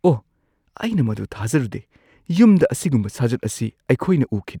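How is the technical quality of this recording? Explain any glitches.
The speech recording has no technical glitches to explain. Nothing heard in it points to a fault in how the sound was captured or passed along.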